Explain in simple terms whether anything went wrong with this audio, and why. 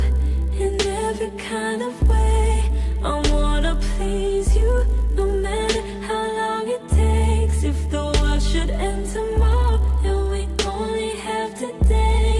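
A resampler restarted on every block, converting each 20 ms chunk alone, so every seam leaves a tiny tick, fusing into a 50 Hz buzz throughout.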